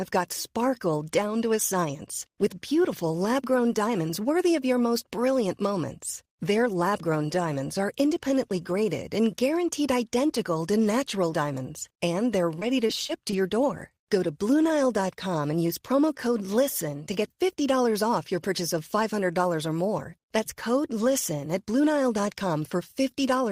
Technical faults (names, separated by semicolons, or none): repeated packet loss (robotic sound)